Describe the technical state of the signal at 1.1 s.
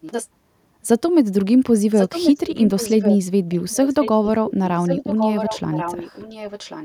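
At 1.1 s the signal is intact, with no dropout, distortion, glitch or other technical fault to be heard in the speech at that point.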